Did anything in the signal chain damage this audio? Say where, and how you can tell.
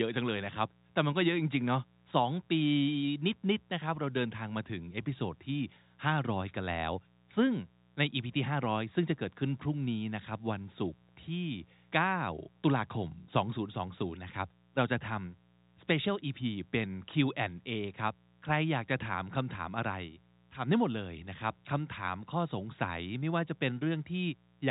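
Yes, in the analogue wiring: a steady, raspy 60 Hz mains buzz runs throughout, roughly 35 dB under the speech, from switching spikes entering twice per mains cycle.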